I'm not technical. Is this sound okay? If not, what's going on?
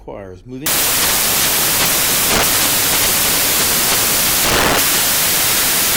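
No. From about 0.66 s to the end, the sound turns into loud hiss, like white noise. This is a case of samples built from the wrong bytes. Digital audio stores each tiny moment as a number split across several bytes. Here the player joins those bytes in the wrong order or position. The small, jittery parts end up in charge, so the real sound is buried under noise.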